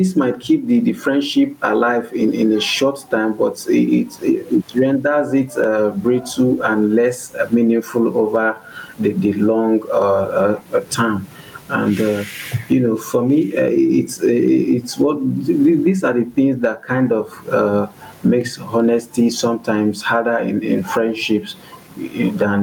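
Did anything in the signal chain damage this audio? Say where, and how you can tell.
Yes. Gain pumping runs throughout the speech: the gain swings by around 15 dB, pushing loud and soft parts closer in level and squashing the sound, with the room noise, normally about 44 dB below the speech, present underneath. The likely cause is input gain set far too high with a fast limiter clamping it. A waveform shows a flattened, squashed envelope; a spectrogram shows the noise floor brightening between phrases.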